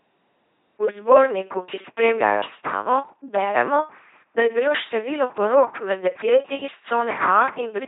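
From start to finish the speech has a buzzing, mechanical robot quality, with harsh buzz or hiss breaking in wherever the voicing is misjudged and nothing audible above 3.8 kHz. This is LPC-10 vocoder damage, and heavy: each moment is rebuilt from a short all-pole filter excited by either a pulse train or noise, never a mix, so natural vocal texture is lost. The sound fits a 2.4 kbit/s coder.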